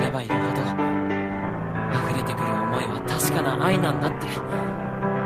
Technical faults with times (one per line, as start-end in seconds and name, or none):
none